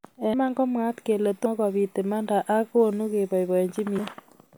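It's a short speech clip with compressed frames skipped three times: at 0.34 s just before "komwaat kele", at 1.46 s between "komwaat kele" and "kobit imanda ak konu", and at 3.98 s. Each time the audio lurches forward, losing roughly 150 ms at the first gap and about 200 ms at the others, which fits whole 32 ms codec frames being dropped as missing or rejected.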